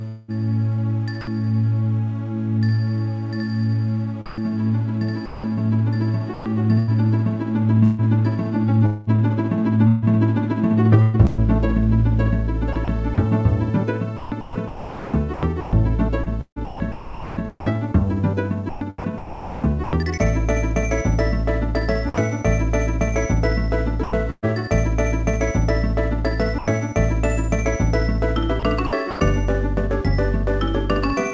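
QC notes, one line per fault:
0.08–1.27 s, 4.26–11.41 s, 12.73–19.93 s, 24.03–24.46 s, 28.60–29.20 s: sound chopped by the voice detector. Within each span, pieces of sound flick out and steady comfort noise fills in, about 0.26 s, 1.3 s, 2.6 s, 0.21 s and 0.18 s in total respectively, so the sound is choppy. The likely cause is the sender's voice detector repeatedly toggling transmission on and off. On a spectrogram, the structured detail gives way to smooth, featureless noise patches with hard vertical edges, all within the band below 8 kHz of the call path. The waveform shows flat, low-level blocks cut abruptly into the envelope.
26.59 s: sound dropped by the voice detector. For about 90 ms the sound stops and a steady wash of noise takes its place, losing roughly 70 ms of real content before the sound resumes. The likely cause is the detector judging a quiet moment as background and halting transmission, with the receiver substituting comfort noise. 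On a spectrogram this appears as a narrow vertical strip where the detail vanishes into uniform noise. The waveform shows a brief, flat, low-level band.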